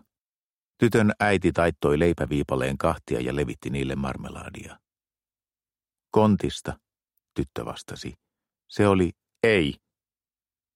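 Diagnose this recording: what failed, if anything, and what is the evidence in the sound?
Nothing failed; no fault is audible anywhere here.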